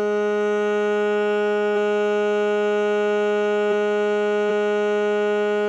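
At 1.72 s, 3.67 s and 4.46 s the music is broken by damaged data in a compressed stream: corrupt bytes throw the decoder out of sync, giving a brief chirp or blip. Each shows as a thin broadband vertical streak and a jagged waveform glitch.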